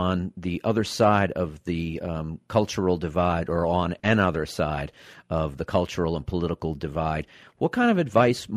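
At 3.99 to 4.06 s, between "cultural divide or on" and "side of the cultural", there is a short concealed packet loss. About 40 ms of the speech stream arrived too late or not at all, and the receiver patched the gap by extending the preceding sound before crossfading back into the real signal. The result is a brief smeared, wobbly spot in the speech.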